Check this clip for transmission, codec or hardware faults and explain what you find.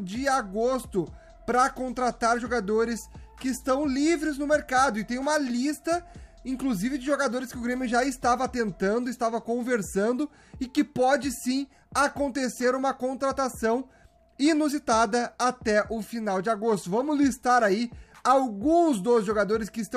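No faults turn up anywhere in this clip.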